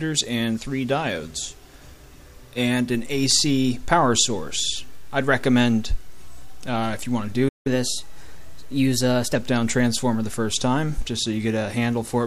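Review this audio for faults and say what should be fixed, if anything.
A DC step appears at 2.95 s, where the waveform's zero line jumps and a low thump sounds, and it steps back with a second thump at 11.02 s. Unlike a click from a dropout, the sound carries on unbroken through both thumps. To prevent it, high-pass or DC-block the input and avoid switching offset sources or recalibrating the converter mid-recording.

A playback stall cuts the output to silence from 7.48 to 7.67 s, a gap of about 0.17 s, likely because the player ran out of data or its thread was blocked. Unlike a gap edited into the recording, the sound resumes where it stopped. To prevent it, use a larger playback buffer and give the audio thread priority.

A catch-up at higher speed runs from 7.67 to 9.35 s. The player plays the backlog at 1.1 times normal speed, raising pitch by about one and a half semitones, then returns to normal. 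Unlike a tempo change in the material itself, the rise follows the gap directly and pitch and speed move together. To prevent it, drop the backlog or stretch time without shifting pitch instead of resampling.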